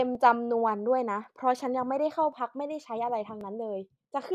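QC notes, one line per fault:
0.15–3.41 s: clock drift buffer slips. About four regular clicks, one every 1.09 s. Likely mismatched device clocks, each slip dropping or repeating a few dozen samples.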